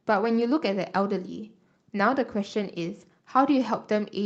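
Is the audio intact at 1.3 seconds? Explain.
Yes, the audio is intact at 1.3 seconds, with the speech passing cleanly through the WebRTC call path and no dropout, glitch or distortion at that point.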